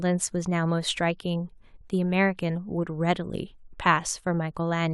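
No technical faults can be heard anywhere in the recording, and the signal stays continuous and steady throughout.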